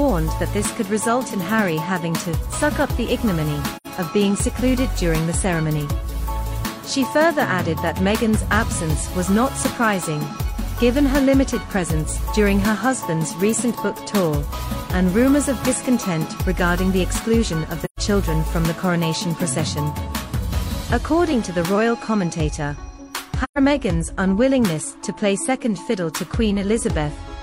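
The audio has three soft-edged dropouts from AAC frame loss with muting, at 3.76–3.87 s, 17.84–17.99 s and 23.43–23.58 s, lasting about 85 ms, then 128 ms twice, which fits two and three lost frames. The decoder zeroed the missing spectra, and the overlapping windows fade the sound out and back in.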